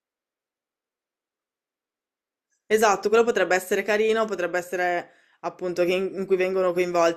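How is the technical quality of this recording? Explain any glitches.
Listening closely, nothing in the speech stood out as a technical glitch or fault.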